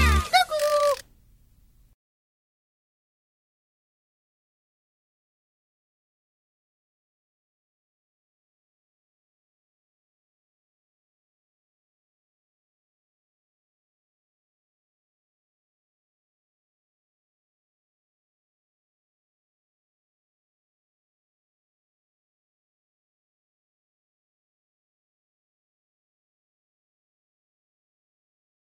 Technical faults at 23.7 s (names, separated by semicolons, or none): none